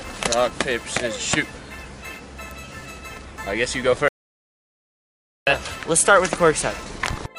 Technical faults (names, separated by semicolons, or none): audio dropout to silence